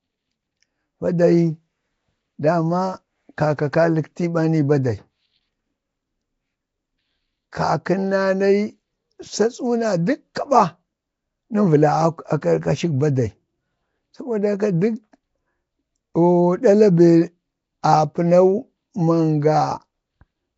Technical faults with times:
0.00-20.57 Nellymoser compression
10.35 pre-echo

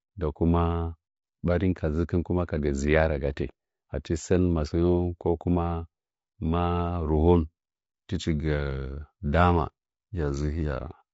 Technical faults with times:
0.00-11.13 low-delay AAC compression

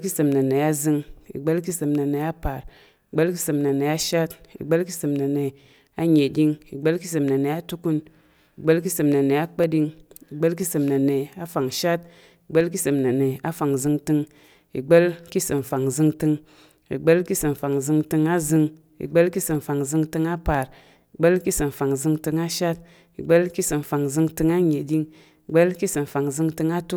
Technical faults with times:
0.71-26.49 clock drift buffer slips

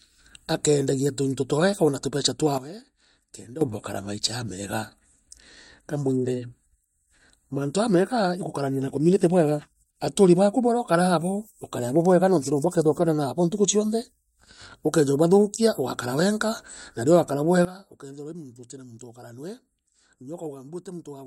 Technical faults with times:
2.58-3.61 sudden gain jump
17.65-21.26 sudden gain jump

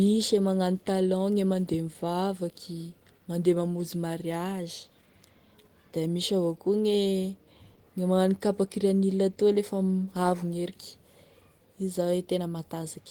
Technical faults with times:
none

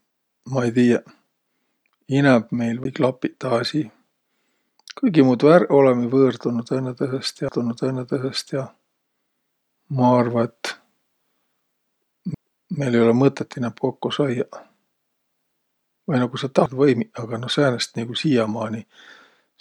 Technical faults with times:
2.84 CD skip
7.48 CD skip
12.34 CD skip
16.66 CD skip

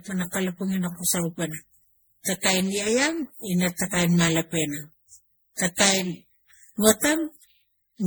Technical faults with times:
0.00-8.07 generation loss

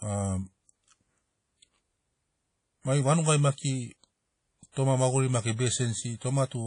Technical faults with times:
0.00-6.67 WMA compression
4.72-4.76 pre-echo

